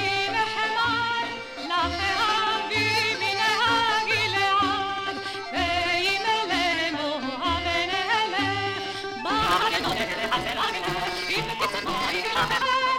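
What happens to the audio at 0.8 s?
Nothing goes wrong at 0.8 s; the audio plays through that point intact, with no audible fault.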